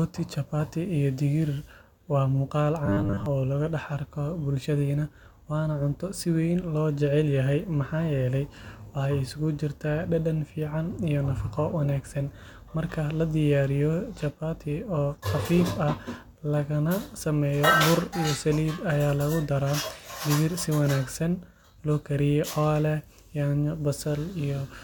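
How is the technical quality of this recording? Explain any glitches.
There's one glitch: robotic sound from repeated short buffers, from 2.86 to 3.26 s. The speech turns into a rigid, metallic buzz at 100 Hz. Likely cause: audio arriving too slowly, so a roughly 10 ms chunk gets looped, replacing most of that stretch.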